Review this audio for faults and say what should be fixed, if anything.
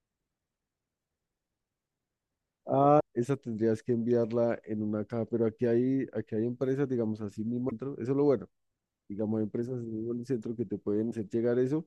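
Damaged data in a compressed stream causes three short bursts in the speech: 2.99 to 3.01 s, 7.67 to 7.72 s, and 11.08 to 11.13 s. Each lasts roughly 20 to 50 ms and is heard as a brief chirp or blip. At each point, corrupted or missing bytes in the encoded stream cause the decoder to misread the affected frames and lose sync until it finds a valid frame header. Prevent it by checking file integrity after transfer and re-encoding or recovering the damaged regions from a clean source.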